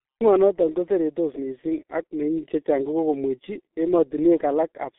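Throughout the speech the sound is muffled and hoarse, with consonants smeared together and nothing audible above about 3.8 kHz. That points to the G.723.1 codec, heavily damaged, at roughly 6.3 kbit/s: its coarse 30 ms frames and narrow 250 Hz to 3.5 kHz band strip detail and blur fast transitions.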